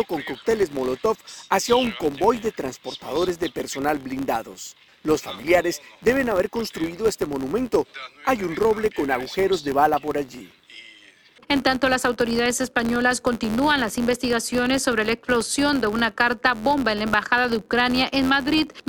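Right through the clip there's a buzz at about 86 Hz, the filter restarted on every block: each block, likely 512 samples, starts from silence and ticks, tracking the sound's level.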